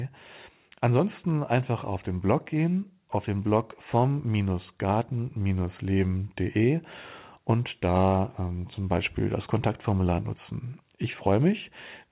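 No technical faults are audible.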